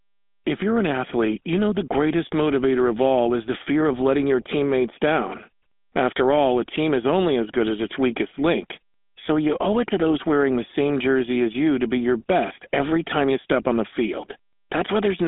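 GSM full-rate codec damage runs through the whole recording. The codec models the vocal tract with a short filter and excites it with a sparse pulse train, keeping only one sample in three of the residual, so the speech takes on a clearly audible buzzy, gravelly grain. The band is confined to roughly 200 Hz to 3.6 kHz with nothing above 3.8 kHz, leaving it muffled and boxy, a sound that fits the 13 kbps full-rate mode.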